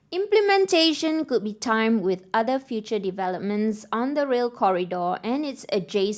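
Nothing goes wrong anywhere in this one, so there's no fault to point to at any moment of the recording.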